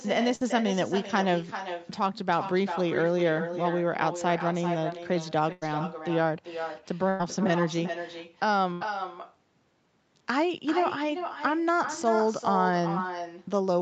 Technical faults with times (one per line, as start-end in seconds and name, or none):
0.00-13.81 echo with no canceller
0.35-0.43 burst of packet loss
5.52-5.63 burst of packet loss
7.09-7.21 burst of packet loss
8.73-8.83 burst of packet loss